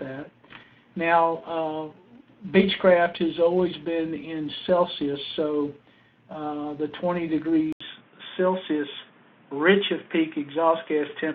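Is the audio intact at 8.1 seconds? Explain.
No. From 7.73 s to the end of the clip, the sound has the signature of an input switched to a poorer device, most likely a change to another microphone or a headset's call profile. An 80 ms silence marks the switch. After it, nothing reaches above 3.8 kHz, so the sound turns dull and boxy at 8.1 s. The level stays about the same. A simple low-pass filter or codec bandwidth drop would not add the gap at the switch or the new background noise that now sits roughly 35 dB below the signal.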